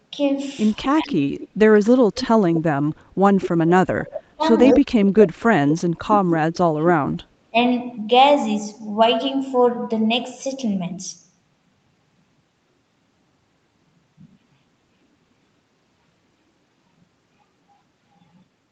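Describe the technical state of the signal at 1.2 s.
At 1.2 s two things overlap. There's an echo leak running from 0.83 to 1.48 s: a faint copy of the speech trailing about 253 ms behind, sitting well below the main voice. Most likely a loudspeaker on the far side fed back into its mic and the echo canceller didn't fully catch it.

Right in that window, from 0.89 to 1.26 s, the speech gets suppressed in double talk. The level falls away sharply, something like 25 dB at its deepest, for around 0.4 s, so the speech dips while the echo plays. The canceller likely turns everything down when it can't tell the talker apart from the echo.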